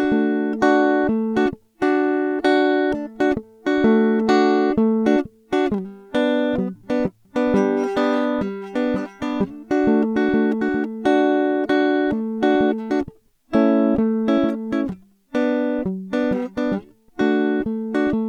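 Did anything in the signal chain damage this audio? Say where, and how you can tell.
No, nothing in the signal chain has damaged this music. No stage along the way has left any audible mark on the sound.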